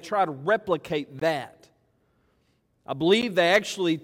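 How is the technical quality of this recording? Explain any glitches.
The recording has two short dropouts, both gaps at a join of encoded pieces. The first runs from 1.20 to 1.22 s and lasts 20 ms. The second, at 3.22 s, lasts 11.4 ms. The audio was encoded in pieces about 2 s apart and joined untrimmed. Encoder start delay and end padding left silence at each join. The sound cuts out with smeared edges, then resumes where it stopped.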